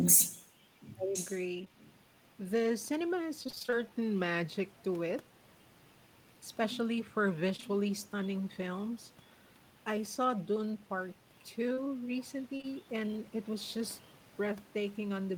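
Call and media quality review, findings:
Speech suppressed in double talk, 0.92–1.16 s: near-end level dips by about 30 dB, roughly a fifth of a second lost in pieces. Likely the echo canceller misjudging simultaneous talk as echo and attenuating both.

Echo leak, 1.13–1.43 s and 1.80–1.93 s: delayed copy of the voice trailing by 0.94 s, about 15 dB under speech at first, then about 35 dB down. Likely far-end loudspeaker echo escaping its canceller.

Short concealed packet loss, 1.61–1.70 s (two overlapping holes, 1.61 and 1.65–1.68 s) and 7.56–7.64 s: brief smears where 20 ms frames went missing. Receiver extended the preceding sound across each gap, then crossfaded back.

Repeated packet loss (robotic sound), 3.43–3.74 s: choppy stretch of 8 gaps (longest 24 ms), nearly half the span synthesized. Also 11.74–12.65 s: 3 gaps (longest 31 ms), about 8% patched. Concealment chained across back-to-back losses.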